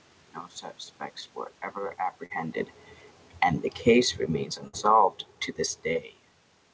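At 2.26 to 2.32 s the speech briefly smears, as if the last sound were stretched for a moment before the real audio blends back in. That is short concealed packet loss: about 40 ms never arrived, and the receiver covered roughly 37 ms by continuing the preceding sound.

From 3.73 s the level gradually sinks, speech and room background together, until about 6.18 s, ending about 6 dB quieter. This is automatic gain falling: the gain control judged the input too loud, or its background noise too strong, and slowly turned it down.

Inside that fade, at 4.68 to 4.75 s, the last sound briefly carries on and fades, then picks up further along, with about 60 ms of audio gone. That is a burst of packet loss: consecutive data were lost or arrived too late, and the receiver extended the last sound for roughly 55 ms while attenuating it.

A second, smaller short concealed packet loss comes at 5.93 to 5.97 s, heard as a quick smear or wobble where about 20 ms was lost and filled by the same continuation.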